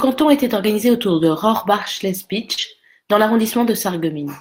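A speech clip with two kinds of packet-loss fault, both brief. At 1.09 to 1.15 s, just after "était organisé", and again at 2.57 to 2.63 s, there is a lost packet rebuilt from error correction. About 40 ms of audio, which fits two 20 ms packets, was replaced by the low-bitrate copy carried in the following packet. Nothing drops out, but the passage turns grainy and noisier. On a spectrogram it shows as a short patch of blurred, speckled harmonics. On the waveform the envelope stays continuous. Overlapping the second of these is a short concealed packet loss, from 2.53 to 2.59 s. Some 40 ms never arrived in time, and the decoder filled about 37 ms of it by extending the preceding sound before blending back into the real signal. It is heard as a brief smear or wobble.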